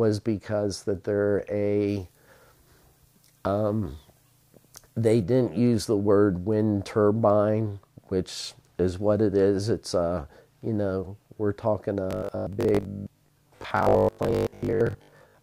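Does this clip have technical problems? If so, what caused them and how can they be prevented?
Yes. From 1.88 to 5.23 s there's pre-emphasis left on: the treble lift of the CD 50/15 µs curve was never undone, so 10 kHz sits about 8 dB hot relative to 1 kHz, and the sound turns thin, bright and hissy. To prevent it, check the emphasis flag and apply the matching de-emphasis on playback or import.

From 12.11 s to the end there's a robotic sound from repeated short buffers. A rigid 50 Hz buzz points to 20 ms chunks being replayed, likely because audio arrived too slowly, with roughly half the material repeated instead of fresh. To prevent it, use larger buffers or a steadier network or CPU budget so the stream never runs dry.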